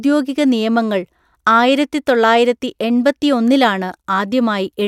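Nothing goes wrong anywhere in this bit of speech, so there's no technical fault to point to at any moment.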